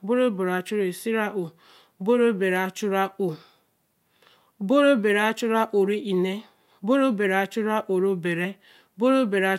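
No technical faults can be heard anywhere in the recording. There is nothing here to place on a timeline.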